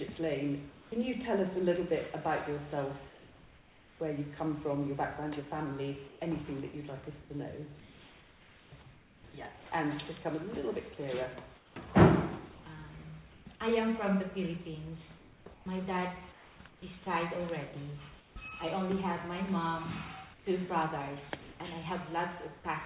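Comfort noise in place of the background, likely from discontinuous transmission, appears at 0.72–0.92, 3.08–4.0, 6.08–9.24, 11.56–13.46, 15.18–16.82, 18.18–18.36 and 20.34–22.64 s, where the real background turns steady and featureless and about 2 to 4 dB quieter in the first, second and sixth spans. At 22.60–22.64 s, sound dropped by the voice detector briefly gives way to that same steady noise. Throughout, the band-limited G.711 call path keeps nothing above 4 kHz.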